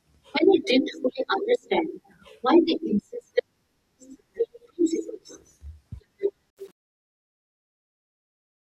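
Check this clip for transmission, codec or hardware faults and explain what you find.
One fault is present, in the closing fade-out of the speech. From 6.50 s to 8.61 s, and worst from 6.67 s onward, there is truncation distortion on a fade. The fade stage drops low-order bits without dither, which fits an 8-bit word length, so the decaying waveform turns into coarse steps and the tail sounds gritty.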